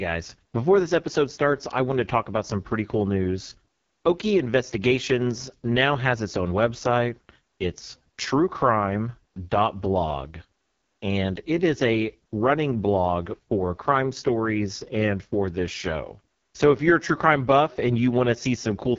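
Speech passed through the AMR wideband (HD Voice) codec at what sounds like its lowest mode, consistent with 6.6 kbit/s, so the vocal tract model is starved of pulses and coarsely quantised. Throughout, the voice is rough and raspy, with nothing above 7.1 kHz.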